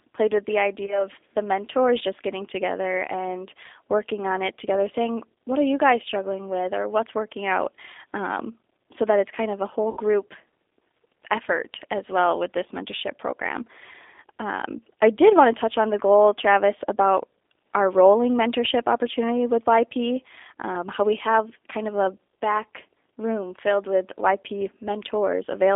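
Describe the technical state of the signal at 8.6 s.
At 8.6 s the speech carries G.729 codec damage, present across the whole clip rather than at that moment alone. The codec rebuilds each 10 ms frame from a vocal-tract filter, a pitch predictor and a few pulses, which fits an 8 kbit/s G.729A stream. The band sits between 300 Hz and 3.6 kHz, and the voice sounds plainly rough and synthetic. Plain telephone band-limiting would leave the tone clean, but here the buzzy, resynthesised texture gives the codec away.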